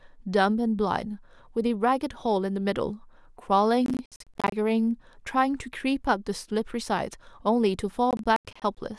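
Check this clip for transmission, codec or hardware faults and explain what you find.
There's one kind of problem here, processor overload crackle, showing up twice: 3.86 to 4.52 s and 8.11 to 8.77 s. The processor kept missing its deadlines for buffers of around 20 ms, each miss dropping a short silent gap with hard edges. Strung together, they turn the speech into a gritty, stuttering crackle that clears once the load eases.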